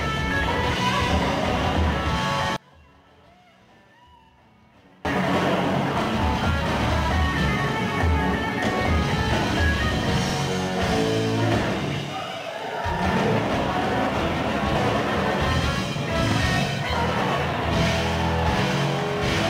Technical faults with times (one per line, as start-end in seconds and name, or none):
0.31 dropped buffer (overrun)
2.56-5.05 one channel inverted
4.25-4.30 overlapping chunks
10.30-10.35 overlapping chunks
10.47 dropped buffer (overrun)
15.76 dropped buffer (overrun)
16.32-16.36 overlapping chunks